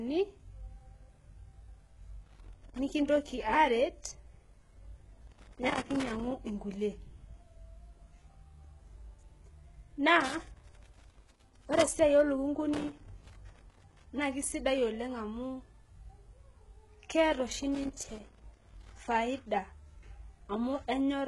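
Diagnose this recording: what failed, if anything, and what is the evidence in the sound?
A loose connector in the analogue wiring is making and breaking contact as it moves, chopping the signal and adding pops from any DC on the line. This is heard as irregular bursts of crackle and scratching at 2.25 to 2.79 s, 5.27 to 6.31 s, 10.20 to 12.00 s, 12.74 to 14.06 s (ending just before "na kesidai oleng amu"), and 17.75 to 18.98 s (starting just after "keeta oshi").

At the codec stage, the speech was likely encoded with HE-AAC at a very low rate, which fits about 12 kbps. The encoder kept only the lower spectrum and synthesised the treble by copying lower bands upward under a coarse envelope. The codec damage is heavy: harmonics fail to line up across the crossover, s sounds come out gritty, metallic or lispy, and nothing remains above 11.4 kHz.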